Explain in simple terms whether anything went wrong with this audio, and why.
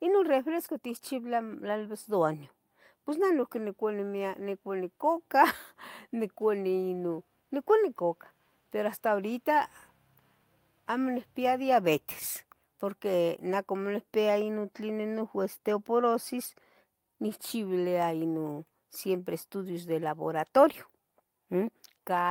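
Nothing went wrong here; the recording has no audible problems.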